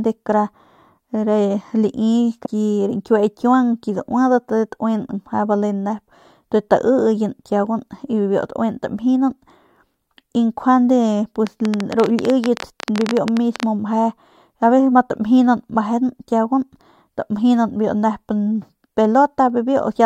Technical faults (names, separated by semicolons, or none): damaged data in a compressed stream; train of clicks